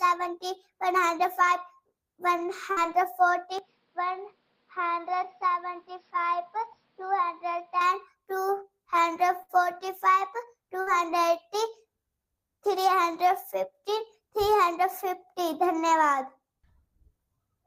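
Bursts of packet loss hit at 2.71, 9.42 and 10.81 s, each lasting under a tenth of a second: the receiver stretches the last sound for 50 to 62 ms while fading it, then jumps ahead, skipping about 60 ms of audio. From 3.59 to 7.81 s the audio turns duller, with nothing above 5.6 kHz, drops by roughly 5 dB, and gains a faint new noise floor around 40 dB down, with no gap at the change, likely an input switched to a poorer device.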